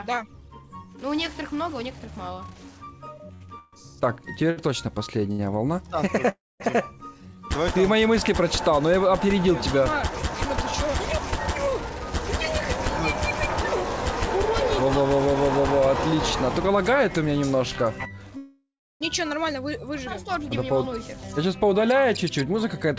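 From 3.34 to 5.41 s the audio shows repeated stalls (stutter). Packets arrived late or slower than playback, so the jitter buffer emptied four times. Each time the receiver extended the last sound until data resumed. The longest fill is 140 ms, and about 334 ms in total is filled, roughly 16% of that span. Nothing is lost, but the passage drags and hiccups instead of flowing.

At 6.29 s a call audio freeze begins and lasts until 6.62 s. The likely cause is packets held up in transit, which left the jitter buffer empty for 308 ms. The receiver continued the last sound briefly, then faded, leaving about 220 ms of silence. Playback then resumes where it stopped. Nothing is skipped, but a gap has been pushed into the audio and everything after it shifts later.

From 14.83 to 16.78 s a jitter buffer speed-up occurs. The buffer was holding more audio than its target. To reduce latency the receiver trimmed short pitch-period-length slices many times in succession, removing around 70 ms overall. 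Playback runs at about 103% with pitch unchanged.

A second call audio freeze runs from 18.37 to 19.03 s, a 636 ms stall, likely again from delayed packets draining the buffer. The held sound fades out, leaving about 360 ms of silence, before playback picks up where it left off. The band stops at 8 kHz throughout, which fits G.722 at 64 kbps on the call path.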